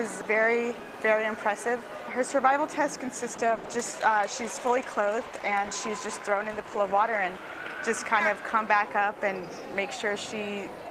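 From 3.3 to 7.33 s, a call bitrate drop cuts the encoder from 32 to 14 kbps, leaving continuous rough, watery sound rather than gaps.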